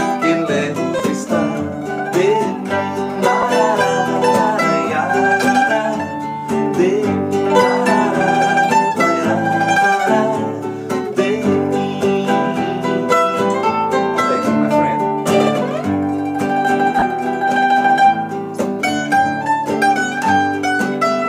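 Bluetooth LE Audio frames were lost three times, and the LC3 decoder filled each gap by repeating the previous spectrum with randomised signs. This turns the sound into a brief noisy smear at 0.99 s and 3.42 s, each lasting about 10 ms, and from 16.99 to 17.02 s, lasting about 30 ms. The lossy compression leaves only light codec damage.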